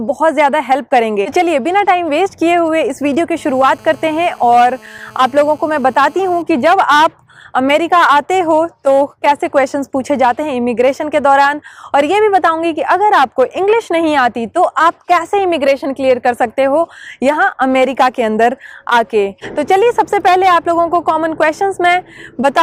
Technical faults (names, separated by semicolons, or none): GSM signalling bursts; GSM phone buzz